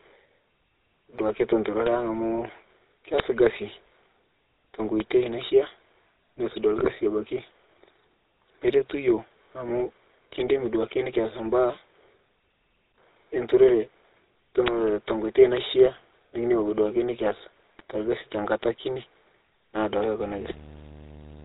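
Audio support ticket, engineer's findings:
GSM full-rate codec, whole clip: buzzy, gravelly speech with nothing above 4 kHz, which fits a 13 kbps GSM full-rate stream. On a spectrogram the content stops abruptly at 4 kHz, with coarse harmonic smearing below it.

Bit error spikes at 1.87, 3.20, 5.00, 14.68 and 15.57 s: single sharp ticks. On the waveform each is a one- to three-sample vertical jump that snaps straight back. On the spectrogram each is a thin full-band line unrelated to the speech. Probable flipped bits in memory or on a digital link.

GSM bit errors at 6.78 to 6.90 s and 17.79 to 17.82 s: squawks, pops and a gargling break. Corrupted filter, pitch and gain parameters reached the speech decoder. The spectrogram shows blotchy, misshapen frames, and the waveform shows sudden level bursts.

Video or display buzz from 20.2 s to the end: a 75 Hz buzz with hash above it, around 20 dB below the speech. 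This points to a screen or video cable coupling in. On the spectrogram it appears as a 75 Hz harmonic comb with a noise haze above.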